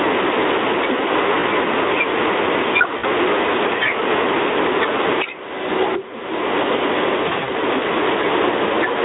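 All the way through, you can hear gain pumping. The level ducks by around 15 dB under each loud bit of speech, which is most likely a fast limiter fighting gain that's set way too high.

Then there's VoIP packet loss concealed by the speech codec. From 1.39 to 1.46 s about 40 ms goes missing, which fits two 20 ms frames. The decoder fills the hole by stretching the last sound out and letting it fade. From 2.97 to 3.05 s about 60 ms drops out and gets the same treatment. The worst stretch is 7.23 to 7.5 s, where about 140 ms is lost in short runs of up to 40 ms spread over roughly 240 ms, so the voice goes weak in bursts.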